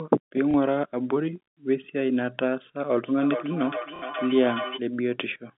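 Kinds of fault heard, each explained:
Packet loss with last packet repeated: the previous fragment is replayed into the gaps at 0.51 s and 3.96 s, so you hear a small blip and then a short robotic stutter rather than silence.
Feedback echo between two devices: from 3.05 to 4.84 s the speech returns in distinct, thinning repeats roughly every 0.4 s, reaching about 9 dB below the speech, unlike smooth room reverberation.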